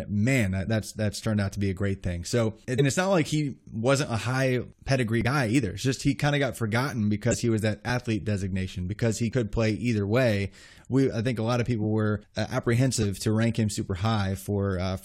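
Compressed frames skipped at 0.66, 2.75 (just before "it's not like he"), 5.21, 7.30 (between "kind of got forgotten" and "he was that athlete"), 9.32 and 13.02 s (between "were uh" and "to rank him"). Each time, whole coded frames never reach the output, so the speech lurches forward by roughly 20 to 100 ms, with the longest jump near 2.75 s.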